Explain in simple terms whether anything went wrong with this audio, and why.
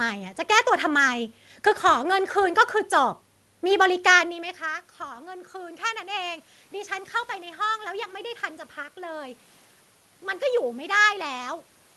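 From 4.28 to 7.19 seconds the voice and background noise slowly swell louder together. That's automatic gain rising, as the system boosts the level after the talker moves away around 4 seconds.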